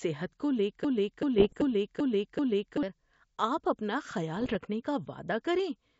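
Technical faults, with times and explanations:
0.85–2.83 s, broken-record loop: from 0.85 s a stretch of about 0.39 s of speech plays back to back five times, identical each pass, until 2.83 s, so you hear the same fragment stutter like a stuck needle. Whatever should have come in those two seconds just isn't there. The likely cause is the player or stream stalling and re-sending the last chunk it had buffered until fresh data arrived.
1.38–1.63 s and 4.36–4.57 s, bit errors on an ADPCM link: two short rough patches, each around a fifth to a quarter of a second, with pops, grainy bursts and little jumps in level. The first lands inside the looping stretch. The pattern fits a light sprinkling of flipped bits, well under one percent. Because ADPCM codes each sample relative to a predicted value and an adaptive step size, one bad bit throws off both the predictor and the step size, so the damage smears over several milliseconds instead of staying a single click. 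The wideband G.722 coding underneath, at 64 kbit/s, shows little or no damage of its own.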